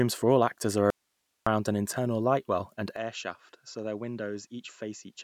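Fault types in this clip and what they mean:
Audio dropout to a faint residue: From 0.90 to 1.47 s the speech abruptly vanishes for about 0.56 s, leaving only hiss roughly 50 dB below it, then cuts straight back in. The likely cause is a brief loss of the signal while the path after the break stayed live.
Input switched to a poorer device: At 2.96 s the speech turns duller and about 10 dB quieter through to the end, with nothing above 7.6 kHz and a new noise floor near 50 dB down. There is no silence at the change, which likely comes from the recording moving to a narrower-band microphone.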